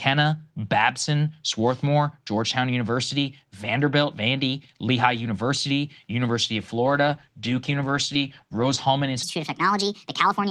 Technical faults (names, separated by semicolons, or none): call bitrate drop; section at the wrong speed